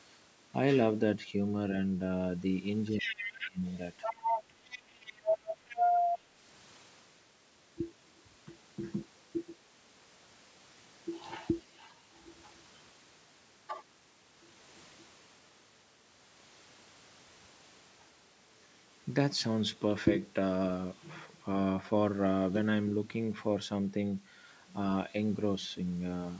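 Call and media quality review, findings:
Speech suppressed in double talk, 2.93–3.63 s and 5.79–5.89 s: the talker ducks by roughly 20 dB in the first stretch and only slightly in the second, both while the far end is also talking. The likely cause is the echo canceller, which couldn't separate the local talker from the loudspeaker echo and squashed both.

Other side's voice leaking through, 2.99–3.48 s, 4.03–4.82 s and 5.04–6.19 s: a second voice is audible on the mic path. It sits a bit under the talker at first, about level by the middle stretch, and louder than the talker in the last one. The likely cause is incomplete echo cancellation of the far end's loudspeaker playback. The mic chain's band limit at 8 kHz is normal call processing, not a fault.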